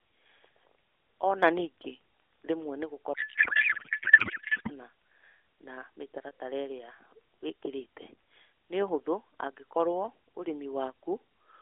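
The clip is speech carried over an AMR narrowband mobile codec, heard as telephone-band sound running from roughly 300 Hz to 3.5 kHz. From 1.23 to 1.42 s, one channel drops out, likely a stereo channel lost before the mono sum. The level falls abruptly by about 6 dB for that brief stretch and then recovers. From 3.14 to 4.72 s, a codec payload misread occurs: octet-aligned AMR frames are decoded as if they were bandwidth-efficient, so every field is read from the wrong bit position. The speech is replaced by garbled noise and warble that barely tracks it, until the framing lines up again.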